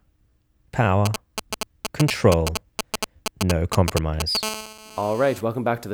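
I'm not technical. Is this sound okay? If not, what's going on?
No, there's interference from a mobile phone. From 1.06 to 4.37 s you can hear GSM signalling bursts: a galloping dit-dit-dit of short buzzes, about as loud as the speech. A nearby 2G phone is talking to the network in short radio bursts, and the audio gear picks them up.

From 4.43 to 5.41 s it turns into GSM phone buzz, a raspy, nearly steady buzz pulsing about 217 times a second, sitting below the speech. That's a 2G phone now on a call, transmitting in steady bursts, with the recording circuit turning those radio pulses into sound.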